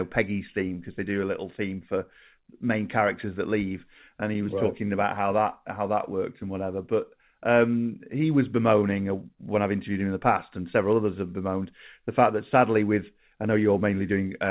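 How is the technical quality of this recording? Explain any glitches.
Listening closely, nothing in this speech recording stood out as a glitch, and the narrow band that comes from a standard telephone-grade call path, with nothing above about 4 kHz, is simply how audio over such a link sounds.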